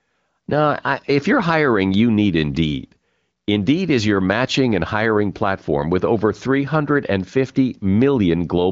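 No technical faults are audible anywhere in this speech.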